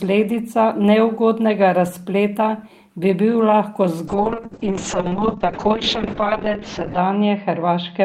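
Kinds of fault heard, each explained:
call bitrate drop: from 4.09 s the encoder falls from 32 to 6 kbps, so speech turns coarse and watery, with bandwidth narrowing from 20 kHz to 8 kHz.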